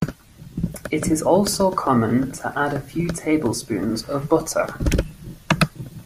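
No technical faults can be heard anywhere in the speech recording.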